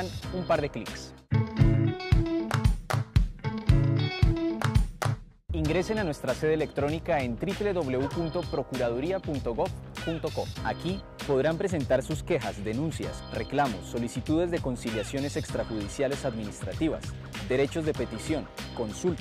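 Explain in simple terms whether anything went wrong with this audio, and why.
Nothing went wrong here: no dropouts, glitches or distortion turn up anywhere in the recording.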